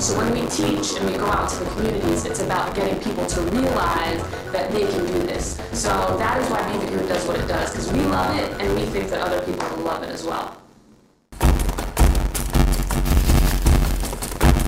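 Buffer tearing runs the whole way through: roughly a fifth of each buffer replays audio about 40 ms old, giving a robotic 93.8 Hz rattle that fits a 512-sample buffer.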